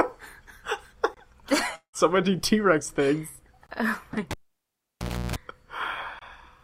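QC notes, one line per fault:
1.14, 3.67 and 6.19 s: gap between chunks. Each is a clean 25 ms hole with hard edges on both sides, repeating every 2.5 s, which fits audio delivered in 2.5 s blocks with silence inserted at every join, from codec padding or late chunk start in playback. Nothing is missing from the programme itself; the flow is simply broken at each boundary, so the holes sound abrupt and mechanical rather than like a dropout.
1.75–1.96 s: long network dropout. Roughly 180 ms of audio never arrives. For the first part the receiver stretches the last received sound into a decaying buzzy fill, then about 90 ms of near silence follows before the signal resumes further along, with the missing portion skipped rather than delayed. The concealment-then-silence shape points to packet loss over the network as the likely cause, with the playout side papering over the hole as long as it can.
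4.31–5.36 s: cable pulled and plugged in. A pop opens an unplugged stretch of about 1.0 s with the signal almost gone. Within it comes a burst of 60 Hz mains hum lasting about 0.32 s, the sound of a plug tip touching the jack before the ground makes contact, leaving the input open to picked-up hum. A second pop marks reinsertion, and the audio returns at 5.36 s.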